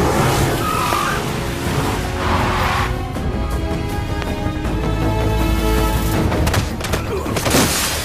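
A loud pop strikes at 0.93 to 0.95 s, and another at 4.22 to 4.24 s. Each is a single sharp click, roughly 15 dB above the sound, which carries on beneath it. The likely cause is a sudden voltage spike entering the signal path.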